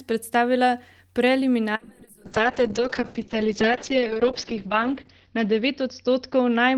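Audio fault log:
1.76–6.78 s, call bitrate drop: the speech turns rough and watery and loses its top end as the bandwidth narrows from 20 kHz to 6 kHz, and it does not recover before the clip ends, holding at its worst for 2.76 s. The coarse, smeared texture fits the encoder being pushed from around 40 kbps down to about 6 kbps after the call's bandwidth estimate fell, forcing cruder coding and a low-pass cut.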